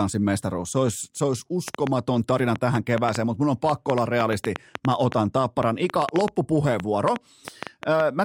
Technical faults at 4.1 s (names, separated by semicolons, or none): train of clicks